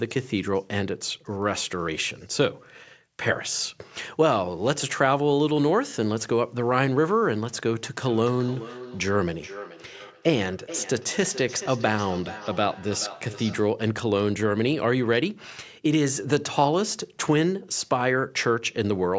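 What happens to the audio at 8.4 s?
At 8.4 s the speech is shadowed by a thinner, ringing repeat of itself arriving roughly every 0.4 s, at its loudest about 14 dB below the speech. This is feedback echo between two devices, from 8.02 to 13.8 s: one device replays the other's microphone, which picks it up again, and neither echo canceller removes it.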